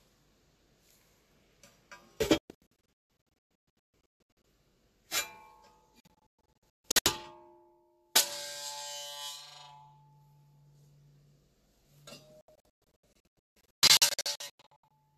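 A recording of sounds with a digital broadcast dropout: the receiver muted in clusters of short holes from 2.38 to 4.45 s, 6.00 to 7.06 s and 12.41 to 14.91 s, each lasting up to 168 ms.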